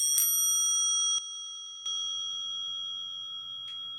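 At 1.18 s the level drops abruptly by about 12 dB, a sudden gain jump. It is likely an unramped gain change. The background falls with it until 1.86 s.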